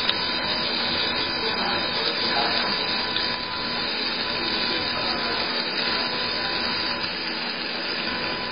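Computer activity noise runs through the whole clip. Load changes in the computer's processor, graphics card or mouse disturb the ground that the audio circuit shares, and that disturbance leaks into the signal as a buzzing pulse train repeating at roughly 500 Hz. It sits only about 15 dB below the wanted sound, so it is plainly audible, and its rise and fall follow the machine's activity, not anything in the sound itself.

Across the full length, the treble is also missing entirely above 5 kHz, and what remains has a heavily watery, swirling texture, with faint components flickering in and out and transients smeared. The likely cause is MP3 compression starved of bits, which fits a very low bitrate around 16 kbps. With so little data, the encoder discards the high band at a fixed cutoff and zeroes weaker frequency lines from frame to frame.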